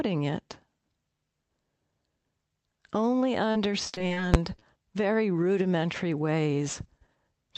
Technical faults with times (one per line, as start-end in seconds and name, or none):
3.51-4.18 repeated packet loss (robotic sound)
4.34 invalid numbers at full scale
4.56-4.63 short concealed packet loss